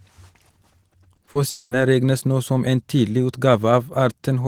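Three brief smears interrupt the speech at 1.15 to 1.19 s, 1.25 to 1.29 s and 1.33 to 1.37 s, each a momentary wobble where the sound briefly loses definition. These are short concealed packet loss: in each case about 20 ms of audio arrived too late to be decoded, and the receiver covered the gap by extending the preceding sound before blending back into the real signal. The three fall within a quarter of a second.

From 1.49 to 1.73 s, the sound is replaced by a continuation of itself that hangs on as a fading buzz or hiss for about 220 ms, followed by a moment of silence, roughly 10 ms, before speech resumes with "regnes nå som en". The likely cause is a long network dropout, in which nothing arrived for that stretch and the concealment stretched the last sound across the hole. The audio picks up later without the lost portion.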